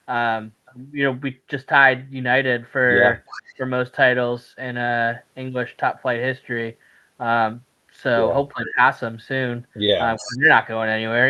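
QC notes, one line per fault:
3.26–3.54 s, 8.66–8.70 s, 10.16–10.37 s: echo leak, a faint delayed copy of the speech about 15 dB down, trailing by 363 ms, likely residual loudspeaker echo the far-end canceller missed.
3.57–3.61 s, 8.53–8.79 s, 10.20–10.48 s: speech suppressed in double talk, the speech dips by up to about 20 dB in short pieces while both sides talk at once, likely the canceller ducking both.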